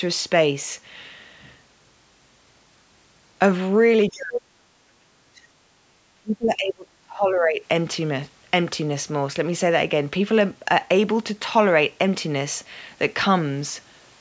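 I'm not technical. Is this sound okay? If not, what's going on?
No. From 4.09 to 5.47 s and again from 6.15 to 7.62 s, the voice sinks sharply and breaks up. This is likely speech suppressed in double talk: both sides spoke at once, and the call's echo canceller turned both down. Between 5.75 and 5.87 s, the room sound briefly drops away and returns. That is background gated by the echo canceller, which turned the microphone down while the loudspeaker was playing.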